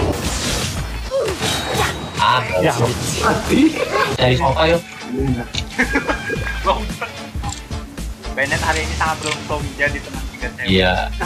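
No technical faults can be heard anywhere in the audio.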